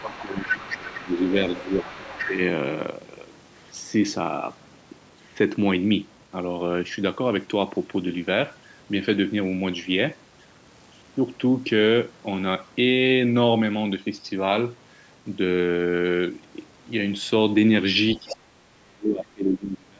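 An echo canceller that most likely failed to clear the far end's loudspeaker sound from the microphone lets the other side's voice leak through from 0.0 to 2.31 s. The second voice sits only around 10 dB below the talker. Over the same stretch, to 2.39 s, the speech is suppressed in double talk: with both sides active, the canceller likely turns the near talker down by as much as roughly 15 dB, so the voice dips and loses presence for about two seconds.

From 18.15 s to the end of the clip what is likely the same double-talk suppression returns, far more deeply, with drops of roughly 35 dB. The speech falls away in pieces, nearly cutting out, for about two seconds. Within it, from 18.29 to 18.36 s, a brief scrap of the other side's voice leaks through, around 15 dB below the speech. Above all this, the call's microphone processing limits the audio to nothing above 8 kHz.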